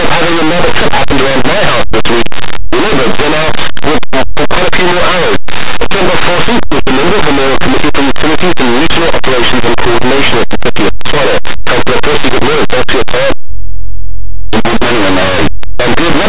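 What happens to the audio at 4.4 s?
At 4.4 s the speech carries very loud, harsh distortion from linear audio read as companded, a fault that runs through the whole clip. Plain linear 8-bit samples are being expanded as mu-law codes, so small values just to one side of zero become the largest outputs while those on the other side stay small.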